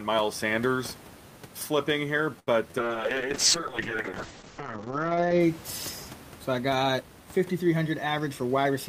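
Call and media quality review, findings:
Held, slightly buzzy sound at 2.39–2.49 s, just after "flipping here": short stall from a late packet. Jitter buffer ran dry, last sound stretched about 78 ms until the packet arrived.

Brief smear at 2.71–2.89 s: short concealed packet loss. About 20 ms never reached the decoder; the receiver extended the preceding sound to bridge the gap, then blended back.

Rough, muffled speech 2.79–5.46 s: call bitrate drop. Bandwidth estimate fell, encoder went from 48 to 7 kbps, audio bandwidth from 20 kHz to 8 kHz, lowest rate held about 2.5 s.

Hurried delivery 8.06 s to end at unchanged pitch: jitter buffer speed-up. Excess buffered audio trimmed by pitch-period cuts, running about 109% speed, removing roughly a tenth of a second. Room noise sits about 20 dB below speech.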